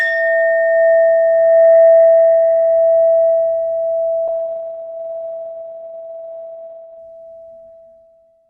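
A call bitrate drop starts at 4.28 s and runs to the end. The encoder was squeezed from roughly 32 kbps to about 9 kbps, coding more coarsely and cutting the top above 4 kHz, so the sound turns muffled and watery, worst for about 2.7 s.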